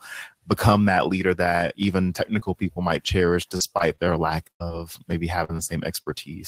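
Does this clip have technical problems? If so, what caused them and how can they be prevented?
Yes. From 2.39 to 6.12 s, after "that leader that even", repeated packet loss (robotic sound) leaves ten gaps, the longest 92 ms, each patched by extending the previous sound. Jitter buffering and forward error correction on a stabler network link would prevent this.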